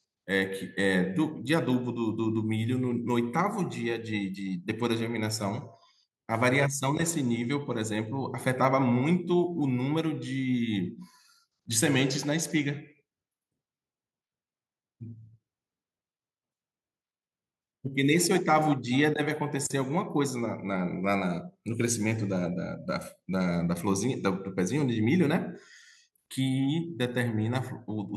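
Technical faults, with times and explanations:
Nothing technical stands out anywhere in this speech recording, so there's nothing to list here.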